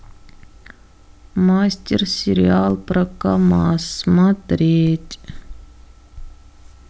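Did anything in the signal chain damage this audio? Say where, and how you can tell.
Yes. At the converter or analogue input, the zero line of the waveform jumped twice, a DC step of about -22 dBFS at 2.70 s and again at 4.87 s. Each offset then bleeds away through a 20 Hz high-pass, so both are heard as a brief low thump while the speech carries on unchanged.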